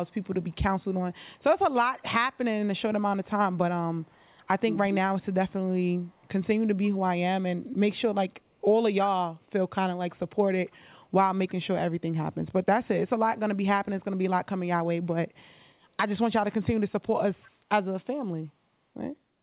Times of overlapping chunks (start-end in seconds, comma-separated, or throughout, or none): none